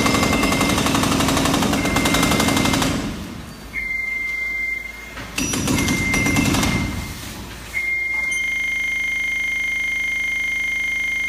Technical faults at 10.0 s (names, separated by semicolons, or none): system hang loop